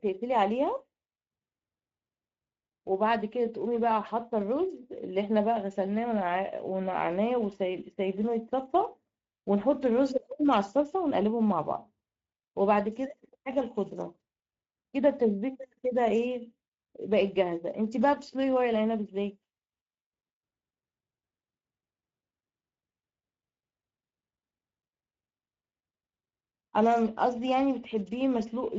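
From start to finish the speech carries Speex codec damage, plainly audible throughout. This CELP coder has too few bits for the excitation, so voiced sounds come out hoarse and grainy with a buzzy, noisy edge, a texture that points to a middle setting around 17 kbps. Nothing reaches above about 7.7 kHz, and the band above 4 kHz is a shaped hiss rather than real detail. That separates it from a plain low-pass, which would sound dull, not rough.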